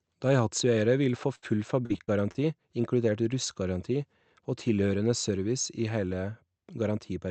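This speech clip, which has passed through a call codec with its top end cut near 8 kHz, has two network faults. The first is a burst of packet loss from 1.35 to 1.52 s, just after "vil få". The receiver lost a run of audio and stretched the last sound to cover it, for about 68 ms. That patch fades as it goes. Another 40 ms of speech is simply gone, and the sound jumps ahead when it resumes. The second fault is repeated packet loss, giving a robotic sound from 1.86 to 2.38 s. Here four short holes arrive in quick succession. The longest lasts 36 ms. Each one is patched by repeating the last sound, so about a fifth of the stretch is filled-in audio. The result is choppy, with small pieces of speech missing.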